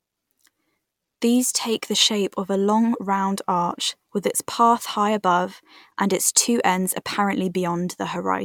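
No technical faults can be heard anywhere in the speech. Nothing in the signal stands out as a problem at any point.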